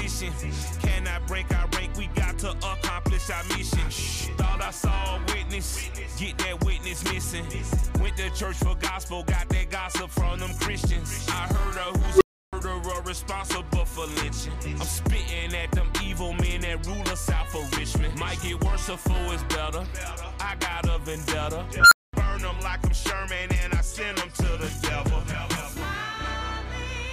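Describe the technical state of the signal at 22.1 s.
A whistle near 1.5 kHz swells over about 0.11 s, clips, then drops to 0.22 s of silence (21.8–22.13 s): an unstable filter whose feedback overflowed before resetting.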